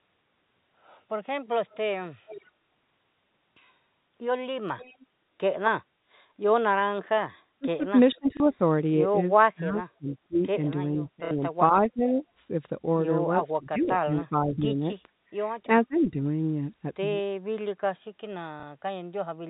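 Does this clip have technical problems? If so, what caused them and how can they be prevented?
Yes, three kinds of fault are audible.

Echo leak appears at 1.7–2.45 s and 4.78–5.06 s. A faint copy of the far talker comes back 452 ms late, about 20 dB and then about 25 dB below the speech. The likely cause is a loudspeaker-side echo canceller that failed to remove all of its microphone pickup. It differs from room reverberation because the copy is a discrete, late repeat rather than a smooth tail. Prevention: use headsets, or give the echo canceller a proper far-end reference and enough time to converge.

Speech suppressed in double talk hits 7.59–8.6 s, 9.55–10.41 s, 10.96–12.21 s, 13.4–15.14 s and 15.84–16.17 s. The talker dips by about 20–30 dB in pieces totalling between a fifth of a second and a second per stretch, while the other side speaks. The likely cause is the echo canceller mistaking the local voice for echo and ducking it. 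Unlike a network dropout, the talker is turned down while the other side is talking. Prevention: tune double-talk detection or use full-duplex processing.

Packet loss with last packet repeated occurs at 8.37–8.40 s, 11.25–11.31 s (60 ms) and 18.60–18.63 s. Each gap is filled by replaying the previous chunk, which fits roughly 30 ms packets. It differs from suppression because it is a brief repeat, not a dip in level. Prevention: use a jitter buffer with proper loss concealment or forward error correction. The G.711 mu-law telephone band itself is heard as the usual 4 kHz-limited sound.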